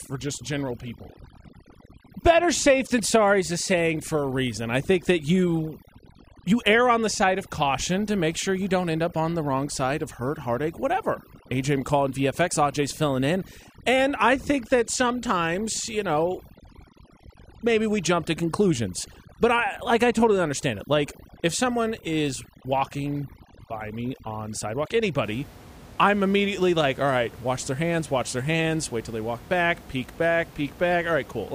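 From 0.0 to 25.24 s the speech shows overdone noise removal: the suppressor, set too aggressively, cuts individual frequency bands that sit near its noise estimate. The room noise, about 21 dB below the speech, drops and breaks up into twinkling specks, and quieter speech components vanish.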